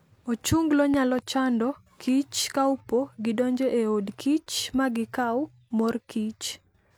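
A loud pop occurs at 0.94 s, with a second following before 1.22 s. These are two sharp thumps standing around 10 dB above the speech, which carries on underneath. The likely cause is a sudden voltage step, from a plug, switch or static discharge, entering the signal chain.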